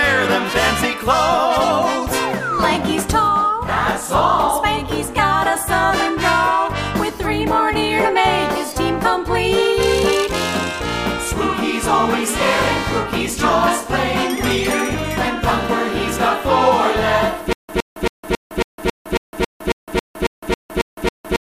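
A likely stream stall from 17.53 s onward produces stutter with silent gaps: one 115 ms burst repeats every 274 ms, with digital silence between.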